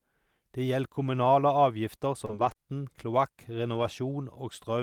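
A speech clip with short concealed packet loss just after "gjeld kommunale avgifter" at 2.25 to 2.31 s and again at 2.53 to 2.57 s: brief missing stretches bridged by extrapolated sound, seen as smeared, repetitive harmonics or shaped noise in the spectrogram. A lost packet rebuilt from error correction spans 2.29 to 2.51 s and 3.75 to 3.89 s, giving gapless but rougher, noisier stretches of 120 ms and 80 ms with a grainier spectrogram texture, consistent with several separate 20 ms packets restored from low-bitrate Opus copies.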